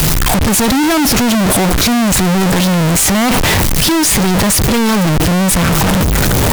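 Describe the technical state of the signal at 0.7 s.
At 0.7 s, as across the whole clip, the speech shows float read as integer, likely 32-bit float samples taken as 32-bit integers so sign and exponent bits set each value. The waveform is a near-square block at an almost fixed, high level. The spectrogram shows dense broadband energy with pitch harmonics still visible, and the sound is loud and harsh, with noise as strong as speech.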